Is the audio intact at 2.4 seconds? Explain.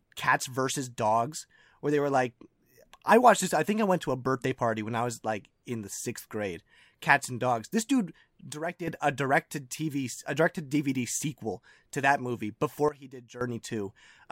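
Yes, the speech at 2.4 seconds plays through without any audible dropout, click, distortion or other fault.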